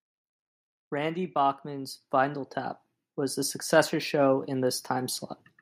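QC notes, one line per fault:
0.90–3.46 s: automatic gain rising. The gain control judged the input too quiet and ramped up about 5 dB before "successor show in". The background swells along with the speech, so it is not simply louder speaking.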